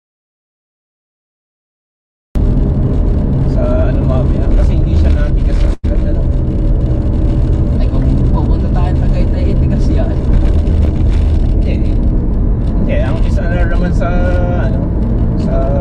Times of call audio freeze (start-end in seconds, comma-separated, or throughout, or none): 5.73-5.85